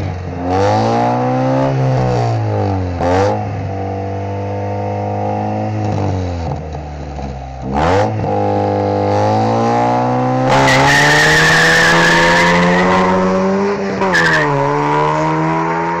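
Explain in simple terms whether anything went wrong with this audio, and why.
Nothing went wrong here.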